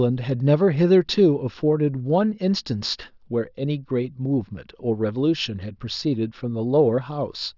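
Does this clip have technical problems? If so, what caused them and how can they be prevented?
No, nothing in this speech recording points to a technical fault, so there is nothing to trace or prevent.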